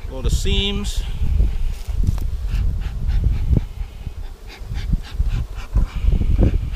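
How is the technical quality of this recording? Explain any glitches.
No glitches turn up anywhere in this recording, so there's nothing here that needs explaining.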